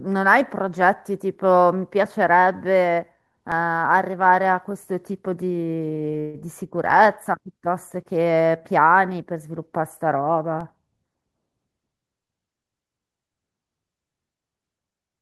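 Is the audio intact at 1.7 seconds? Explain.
Yes, the speech at 1.7 seconds plays through cleanly, with no dropout, click, distortion or other disturbance at that moment.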